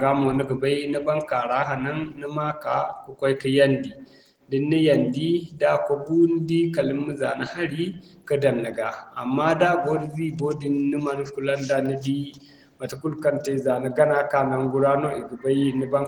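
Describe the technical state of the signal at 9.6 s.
Opus voice compression is present at 9.6 s, as it is across the whole clip. The speech sounds like it was coded in hybrid mode: a linear-prediction layer carries the band up to 8 kHz and a transform layer carries the top, which still reaches about 20.1 kHz. The damage is plainly audible. The excitation is coded coarsely, which fits about 16 kbps in 20 ms frames, so the speech comes out hoarse and slightly robotic.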